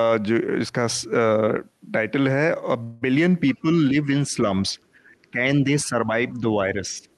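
At 2.83 s the speech stops moving forward and a fading continuation stretches the last sound until 3.04 s. This is a call audio freeze. Packets were likely held up in transit, so the jitter buffer ran dry. The receiver filled about 0.18 s with a smeared continuation of the last sound. Nothing was lost. The speech resumes where it left off, now running about 0.18 s later than before.

From 3.62 to 4.37 s the voice dips slightly. This is speech suppressed in double talk. The other side was likely talking at the same moment. The echo canceller could not tell its own talker from returning echo, so it turned the level down. Here the drop is shallow, around 5 dB, and brief, adding up to roughly 0.15 s.

The same fault returns, much stronger, from 5.22 to 7.05 s. The voice drops by around 15 dB and fades in patches totalling about 0.7 s. It comes through the Opus call path, whose top end stops near 12 kHz.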